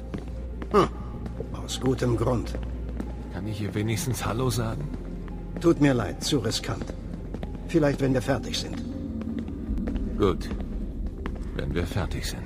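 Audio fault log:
9.78 s, damaged data in a compressed stream. A brief glitch cuts in. Bytes in the stream were corrupted there. The decoder misread the frame, lost sync and jumped to the next valid frame header.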